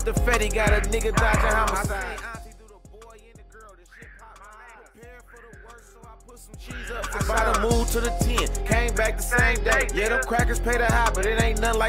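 From 1.63 s to 2.72 s, a fine ticking, zipping texture rides on the audio as its level falls by roughly 25 dB. This is zipper noise: the fade is applied in coarse 1 dB steps at roughly twenty per second, with no smoothing between them, so each jump in gain leaves a small click.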